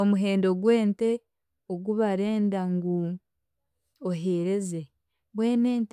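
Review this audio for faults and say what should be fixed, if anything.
No faults; nothing to fix.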